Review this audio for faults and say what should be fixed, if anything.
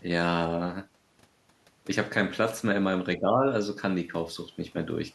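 From 3.17 to 3.47 s the speech drops by about 10 dB. The likely cause is speech suppressed in double talk: the echo canceller turned down its own talker along with the loudspeaker echo. To prevent it, tune double-talk detection so near-end speech passes while far-end audio plays.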